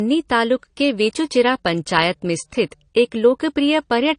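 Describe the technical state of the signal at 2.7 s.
At 2.7 s the speech carries artefacts of transcoding between lossy codecs, present across the whole clip rather than at that moment alone. The likely cause is a chain of two encoders, one resembling low-bitrate MP3 and a later one resembling AAC-LC at a similarly low rate. The second encoder spends its limited bits on the first one's smearing and adds its own, so two kinds of swirly, watery coding artefacts overlap, and nothing is left above 10 kHz.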